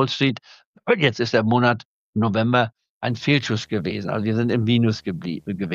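A screen or video cable coupling into the audio path produces video or display buzz from 3.09 s until the end of the clip. The interference repeats at 75 Hz, the display's field rate, so it is heard as a steady low buzz with a fizzy hash of harmonics above it. It sits far beneath the main sound, roughly 40 dB down.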